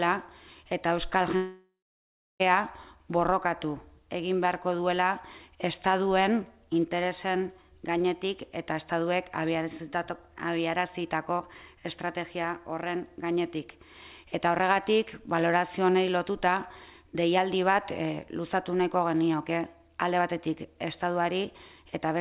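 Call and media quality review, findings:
Long network dropout, 1.36–2.42 s. Audio stops; the last sound is carried on as a fading buzz, then about 0.66 s of near-silence before the signal resumes. Roughly 1.04 s of material is gone, not recovered on return. Likely cause: packet stream interrupted upstream of the jitter buffer; receiver concealment extrapolates briefly, then mutes. Band limit at 4 kHz throughout, consistent with the G.711 A-law call path at 64 kbps.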